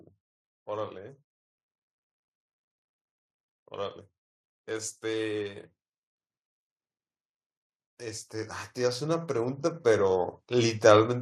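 From 4.68 to 5.69 s, automatic gain rising lifts the level by about 4 dB, then from 7.99 to 10.87 s by about 10 dB. The control judged the input too quiet. Speech and background noise swell together and gradually.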